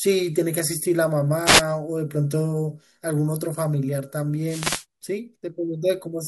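At 1.45 s there's a wireless microphone noise hit lasting about 0.18 s, and a second, longer one runs from 4.46 to 4.85 s. Each is the FM radio link fading as reflected signals cancel the direct one. The receiver's hiss rises up through the gap, so you get a quick swish of static over the speech.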